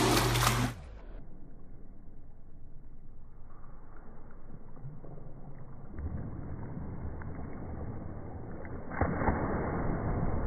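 No technical faults can be heard anywhere in the clip. Nothing interrupts, distorts or disturbs the sound at any point.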